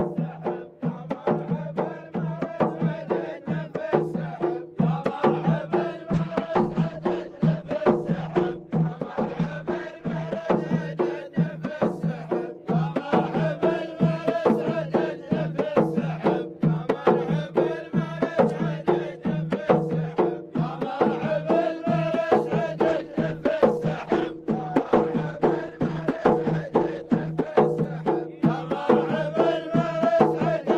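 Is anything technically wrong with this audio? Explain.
Yes. A call bitrate drop occurs twice, from 6.14 to 10.63 s and from 22.89 to 27.61 s. Each time the encoder runs at its reduced rate for about 4.4 s and 4.6 s respectively, with coarseness that fits a fall from around 48 to 14 kbps. Fewer bits mean coarser coding, so the sound turns rough and watery. In the first drop the top end also closes in from 20 kHz to 12 kHz, giving a duller, muffled quality until the rate recovers.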